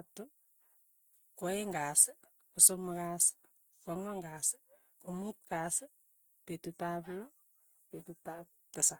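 Throughout, the speech sounds grainy and rough, with a noisy fizz on its tones but little swirling, which points to Opus compression, likely in its music mode at a rate near 24 kbps. Bands are filled rather than dropped, with bandwidth reaching about 20.2 kHz.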